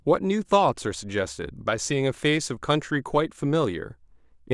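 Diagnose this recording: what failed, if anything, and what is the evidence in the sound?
Nothing failed in this recording, and the sound gives no evidence of any fault.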